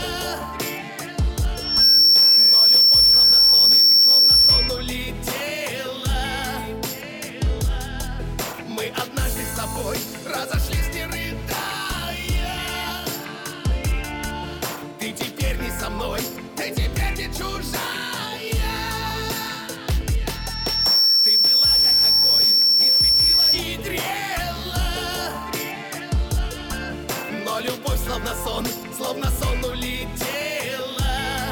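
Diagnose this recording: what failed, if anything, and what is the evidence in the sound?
A piercing 5.4 kHz tone swells up from 1.55 to 4.97 s and again from 20.31 to 23.64 s. It peaks about 15 dB, then about 10 dB, above the programme. This is loudspeaker feedback squeal in the analogue acoustic path: the microphone picks up the speaker it feeds, and at this frequency loop gain exceeds one, so the tone keeps growing.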